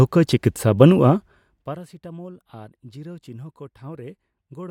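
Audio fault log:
No faults detected.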